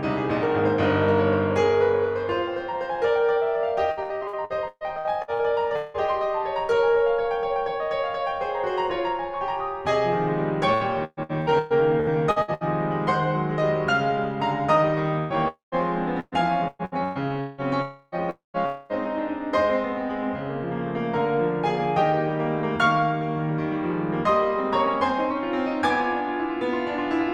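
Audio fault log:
3.91–5.97 s, repeated packet loss (robotic sound): ten gaps, the longest 179 ms, each patched by stretching the last music, leaving a choppy, robotic stretch that is 37% concealed.
10.74–12.64 s, repeated packet loss (robotic sound): nine gaps up to 125 ms, filled by repeating the preceding sound, so the music stutters with a robotic edge and missing fragments.
15.19–17.61 s, repeated packet loss (robotic sound): six gaps up to 173 ms, again patched by continuing the last sound, giving broken, robotic playback with pieces lost.
15.48–15.75 s, long network dropout: inside the choppy stretch, the music turns into a fading buzz or hiss, then 140 ms of silence, likely because about 240 ms of audio never arrived.
17.82–18.15, 18.30–18.57 and 18.66–18.92 s, long network dropout: each time the music decays into a buzz or hiss, with up to 150 ms of silence, and resumes with material gone, likely from repeated network outages.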